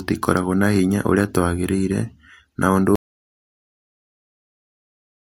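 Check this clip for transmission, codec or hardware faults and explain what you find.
One fault shows up: an audio dropout to silence starting at 2.96 s and running through to the end of the clip, about 2.3 s in all. The input feeding the recorder was likely cut off, through a disconnected device, a broken link or a mute, while writing carried on and filled the file with silence. The speech stops abruptly mid-flow, and what follows is dead silence with no room tone or noise floor underneath. It never comes back, so everything said after that point is lost.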